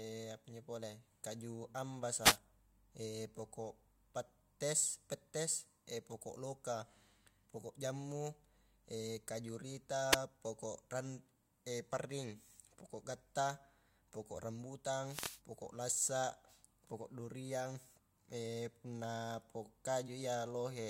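The analogue FM radio link from the microphone loses signal three times as reflected paths cancel the direct one, so receiver noise rises in a wireless microphone noise hit each time. The first runs from 2.21 to 2.38 s, the second is briefer at 10.10 to 10.17 s, and the longest lasts from 15.06 to 15.41 s. Each is heard as a short swish or burst of static over the voice.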